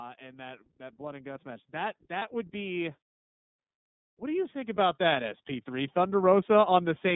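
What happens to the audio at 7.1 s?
At 7.1 s the speech is still passing through the iLBC codec that runs through the whole clip. Each 30 ms frame is coded on its own at about 13.33 kbps, with the line band cut to roughly 150 Hz to 3.7 kHz. The result is muffled, plainly rough, synthetic-sounding speech.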